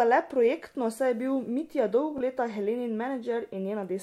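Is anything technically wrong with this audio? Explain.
Yes. Bluetooth stutter at 2.18 to 2.21 s: a late packet, likely a single one, made the receiver replay a roughly 23 ms slice of speech. Unlike a silent dropout, this is a brief repeat, and the speech then resumes slightly further along.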